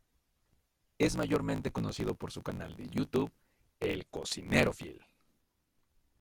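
Throughout, a block size mismatch (truncated) drops block tails, fitting 1024-sample writes: speech runs 1.16 times fast, near normal pitch, under a 54.4 Hz buzz.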